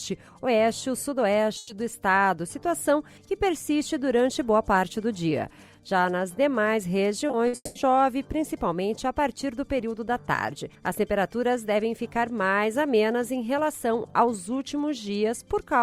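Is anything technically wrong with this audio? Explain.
Yes, there are two packet-loss faults.

From 1.57 to 1.71 s there is a burst of packet loss. The sound briefly freezes into a held buzz or hiss that fades, then picks up further along, with about 120 ms missing. Several packets in a row failed to arrive in time, so the receiver filled the 120 ms hole by extending and fading the last sound it had, then resumed at the next packet.

From 7.27 to 7.77 s, repeated packet loss gives a choppy quality, with fragments dropping out. Four separate gaps fall within this half-second, the longest about 200 ms, and together they cover 300 ms, or 60% of the stretch. Each loss was patched by continuing the previous sound, and the next loss followed before the stream could recover, producing the stuttering texture.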